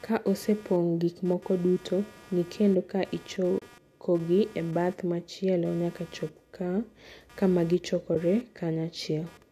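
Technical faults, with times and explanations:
Throughout: computer activity noise, a buzz pulsing around 200 Hz, roughly 30 dB below the speech, from processor or mouse load disturbing the shared audio ground.
3.59–3.62 s: AAC frame loss with muting. About 30 ms, consistent with three 10 ms frames, goes missing. The decoder zeroes it, and the overlapping windows fade the speech out and back.
8.15 s: AAC frame loss with muting. About 10 ms, roughly one short frame, drops out. The zeroed spectrum leaves a brief soft-edged gap.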